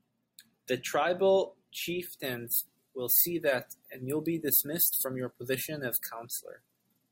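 Speech clip with pre-emphasis left on from 2.24 s to the end: a 75 µs FM-style treble lift was applied but never undone, so highs sit about 14 dB above 1 kHz at 10 kHz, making the sound thin, bright and sibilant.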